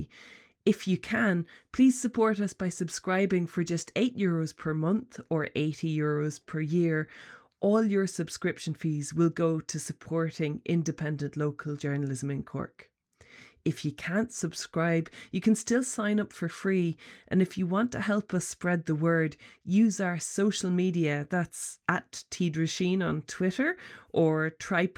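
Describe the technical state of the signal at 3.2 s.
Sample clock jitter at 3.2 s, present throughout: about 0.7 microseconds of random timing error adds faint hiss, roughly 45 dB down, rising on loud, bright speech.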